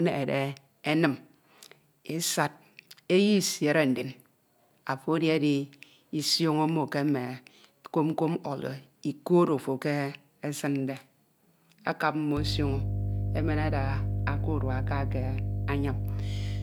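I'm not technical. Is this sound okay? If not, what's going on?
No. From 12.37 s, right after "akap mmo", to the end, there is mains hum: electricity from the power supply leaked into the recording, likely through a ground loop. It adds a steady low 50 Hz buzz, roughly as loud as the speech itself.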